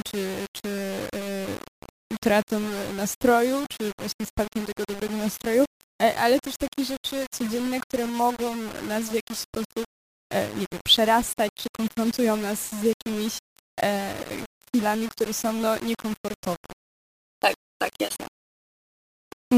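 Grainy, rasping distortion runs through this speech clip from start to finish. It clings to the voice and shifts with it, roughening the quiet tails of syllables and letting the faintest passages crackle or drop out between steps. This is low bit depth without dither. The likely cause is rounding to very coarse amplitude steps, which fits roughly 5-bit resolution, leaving error only about 15 dB below the signal that tracks the waveform instead of forming steady hiss.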